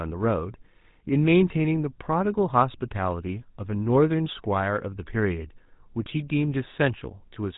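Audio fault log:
throughout GSM full-rate codec: the speech has a clearly audible buzzy, gravelly roughness, consistent with a 13 kbit/s GSM coder rebuilding the voice from a vocal-tract model excited by sparse, evenly spaced pulses. A spectrogram shows a hard ceiling at 3.8 kHz.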